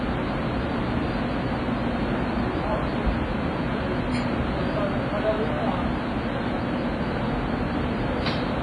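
Throughout, the sound rings and smears, with a washy hiss that swells and fades alongside it and nothing above 10.6 kHz. This is likely WMA compression at a low bitrate, around 24 kbps. Unlike a plain low-pass filter, it also drops weak detail, and the noise spreads in time.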